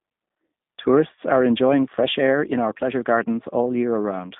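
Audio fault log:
throughout: G.729 codec. The speech sits in a 150 Hz to 3.7 kHz band and sounds plainly rough and synthetic, like an 8 kbit/s G.729A rebuild.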